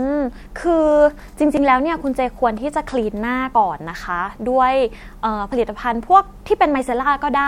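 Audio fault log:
1.57 s, 3.55 s, 5.52 s: audio missing between chunks. The speech skips forward at a steady 2-second spacing, with around 30 ms gone each time, likely lost as 2-second processing chunks were closed and reopened. The waveform shows hard splices with no gap, and the spectrogram shows abrupt vertical seams.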